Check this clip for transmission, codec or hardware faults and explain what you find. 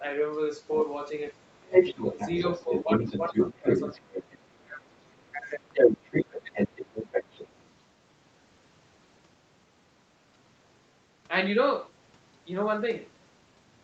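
A second voice, the other side's voice leaking through, sits in the speech from 1.62 to 4.23 s and again from 5.71 to 7.82 s at about the same level as the talker, with a much fainter trace, about 40 dB down, from 4.98 to 5.39 s. This is likely residual loudspeaker echo that the echo canceller failed to remove from the microphone signal.

Speech suppressed in double talk follows where both voices overlap: the talker dips about 10 dB at 2.64–2.89 s, up to about 25 dB across 3.29–4.95 s, about 15 dB at 5.32–5.66 s and about 20 dB at 6.27–6.5 s. The likely cause is the canceller attenuating everything once it cannot separate talker from echo.

Nothing is heard above 8 kHz, which fits the Opus call path at around 32 kbps.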